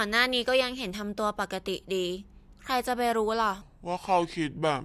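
From 3.62 s to the end, the speech drops in pitch and slows down together, a wrong sample rate fault. The audio is played back at about 0.73 times its intended rate, which fits 44.1 kHz material heard at 32 kHz. That lowers the pitch by about 5.5 semitones. Unlike a tape-style slowdown, the shift is abrupt and steady.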